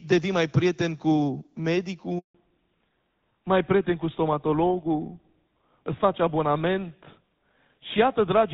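At 2.19 s the speech cuts out in a handover gap lasting 160 ms, until 2.35 s. The call was being passed from one network to another, and no speech frames came through during the switch, so the sound fades within a few tens of milliseconds and leaves dead silence until the new link takes over. On a waveform this shows as a flat line. On a spectrogram it is a clean vertical blank band across every frequency.

From 2.35 s to the end, the call shows a fallback to narrowband. Before the gap, the wideband HD Voice coding carries energy well above 4 kHz with only light codec roughness. After it, nothing remains above 4 kHz, which points to a switch from AMR-WB at around 12.65 kbit/s to an older narrowband codec such as GSM full rate. The speech sounds duller, boxier and rougher. A spectrogram shows a hard horizontal ceiling at 4 kHz from the gap onward.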